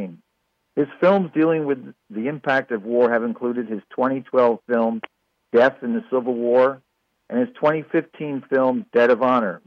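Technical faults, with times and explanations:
No technical faults can be heard in this clip. Nothing in the audio needs a time or an explanation.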